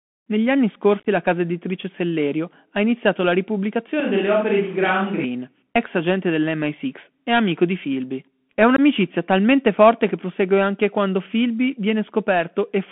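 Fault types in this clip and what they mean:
Bluetooth CVSD headset codec: The whole clip passes through a narrowband headset link, which fits a 64 kbps CVSD stream. Only about 200 Hz to 3.4 kHz survives. The one-bit coding plainly roughens the speech, with scratchy s sounds and a grainy hiss underneath.
Unconcealed Bluetooth headset packet loss: Short voice packets drop out and nothing fills the gaps. From 1.0 to 1.06 s, just before "la casa editrice", about 45 ms goes missing in chopped pieces up to 19 ms. At 8.76 s another 19 ms hole precedes "talmente forte che prosegue".
Switch to a distant microphone: From 4.0 to 5.24 s, just before "ex agente", the speech suddenly turns roomy and hollow. It is about 5 dB quieter, with room noise roughly 30 dB below it. This is likely the close microphone dropping out and a farther one taking over.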